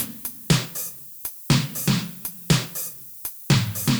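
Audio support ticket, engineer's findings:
Steady thin hiss across the whole clip, climbing sharply toward the top of the band. Low bit depth with noise shaping: signal reduced to 7 bits. Rounding error pushed upward in frequency. Hiss sits only about 15 dB under the signal.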